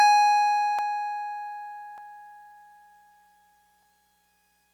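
Two sharp, isolated clicks cut through the music at 0.79 s and 1.98 s, each a thin vertical line across the spectrum. These are likely dropped samples: under a millisecond of the stream goes missing, so the waveform leaps abruptly to a later value.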